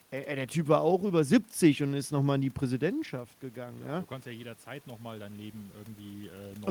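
At 2.92 s the level drops by about 9 dB as the talker moves back, and automatic gain rising follows. The gain control hears a quieter input and lifts its gain slowly through to the end. Voice and room noise swell together.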